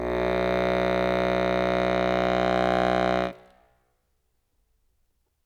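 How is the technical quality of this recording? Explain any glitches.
No technical faults can be heard in this music recording.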